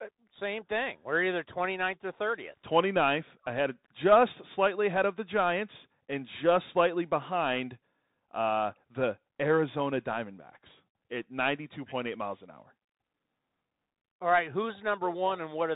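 The whole clip runs through a Bluetooth CVSD headset codec, which fits a 64 kbps link. Nothing above 3.8 kHz survives, s sounds go scratchy, and granular hiss sits underneath the speech.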